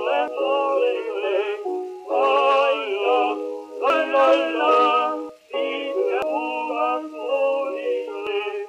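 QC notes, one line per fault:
0.28, 3.90, 5.29, 6.22 and 8.27 s: dropped buffer (overrun), likely. Each is a jump where the sound skips forward with no gap, skipping roughly a tenth to a third of a second. A dropout would leave silence, and a stutter would repeat audio.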